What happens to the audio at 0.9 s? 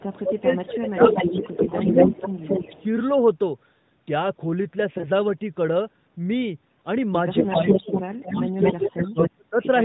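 The echo canceller likely couldn't separate the talker from loudspeaker echo while both sides spoke, so speech suppressed in double talk dips by around 15 dB in pieces between 0.19 and 2.87 s. An echo leak, likely from incomplete echo cancellation on the loudspeaker side, returns a copy of the voice 234 ms late and roughly as loud as the speech, from 0.81 to 2.83 s.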